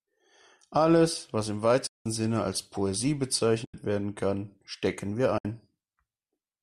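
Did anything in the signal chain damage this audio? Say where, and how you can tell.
Yes. The damage is at the network and codec stage: AAC frame loss with muting. Whole stretches of the stream never reached the decoder, which zeroed their spectrum. There are three gaps: 1.87–2.06 s (190 ms) just after "was im", 3.65–3.74 s (90 ms) just before "werden kann stecken wir", and 5.38–5.45 s (70 ms) just after it. The speech fades out and back in with soft edges, which fits short frames of about 10 ms, likely from a low-delay AAC link.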